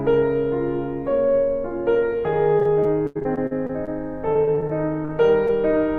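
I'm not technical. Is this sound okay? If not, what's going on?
No. The music has repeated packet loss (robotic sound) from about 2.59 to 3.89 s and again from 4.33 to 5.51 s. Bits of the signal kept dropping out, each patched by stretching the previous sound, so it turns choppy, worst in the first stretch.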